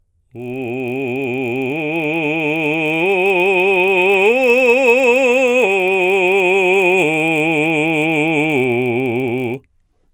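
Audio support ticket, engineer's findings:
Music, whole clip: buzz at 50 Hz riding on the signal, gone in gaps. Resampler restarted on every block. 24 kHz to 48 kHz conversion done block by block, 20 ms blocks, so each edge misses its neighbours and ticks. Ticks merge into buzz.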